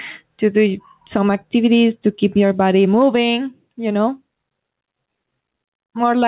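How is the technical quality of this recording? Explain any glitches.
The recording has one clear fault, gain pumping, which runs through the whole clip.

Gain pumping, throughout: the input gain was likely set far too high, so a fast limiter clamps down on each loud syllable and releases in the pauses. The gain swings by around 10 dB, bringing loud and soft parts closer in level and giving a squashed sound. The call path's band limit, with nothing above 4 kHz, adds a narrow, telephone-like tone.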